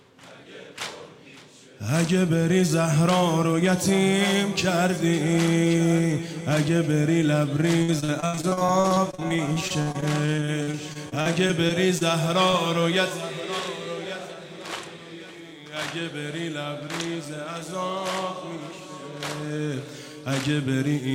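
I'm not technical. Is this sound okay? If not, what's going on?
No, it isn't entirely okay. From 7.79 to 12.03 seconds, the connection kept dropping or delaying small pieces of the audio, over and over. This is repeated packet loss, heard as a robotic sound. Each time a piece went missing, the receiver papered over the hole by stretching out the last bit of sound it had, and the next hole arrived soon after. About a quarter of that stretch is patched-in filler, with gaps up to 71 milliseconds long, so the sound turns choppy and mechanical, with bits missing.

A moment later, at 12.51 seconds, there is one more brief dropout, a short concealed packet loss. About 20 milliseconds of audio didn't arrive in time, and the receiver filled the gap by continuing the sound just before it and then blending back into the real audio. Because the hole is so short, you hear only a brief smear or wobble rather than an obvious break.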